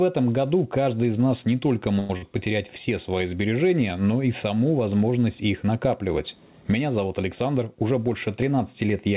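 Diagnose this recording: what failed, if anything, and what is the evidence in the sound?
Gain pumping runs through the whole recording, at the capture stage. The level swings by around 10 dB. Loud and soft passages sit unnaturally close in level, so the speech sounds squashed. The likely cause is an input gain set far too high, with a fast limiter or compressor hauling the level back down on every peak.

A call audio freeze occurs from 1.99 to 2.10 s, after "из нас не только" and before "потерять все свои сбережения". The last sound is stretched into a fading buzz or hiss for about 100 ms, then the speech resumes exactly where it stopped, with nothing lost. This is a network-stage event: packets were likely held up in transit, the jitter buffer ran dry, and the receiver filled the wait, adding roughly 100 ms of delay.

A burst of packet loss follows at 2.17 to 2.23 s, in the same stretch between "из нас не только" and "потерять все свои сбережения". 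For about 50 ms the preceding sound is held and faded as a synthetic buzz or hiss. Then the audio jumps ahead, and about 50 ms of the real speech is gone. A short run of consecutive packets never arrived in time, so the receiver's concealment papered over the hole.

Jitter buffer speed-up runs from 7.42 to 8.85 s. The speech plays about 7% fast at unchanged pitch and sounds slightly hurried. The buffer had accumulated more audio than its target, so the receiver trimmed it back by repeatedly cutting out short pitch-period slices, about a tenth of a second in total. Throughout, the band stops at 4 kHz, which fits a narrowband call codec such as G.711.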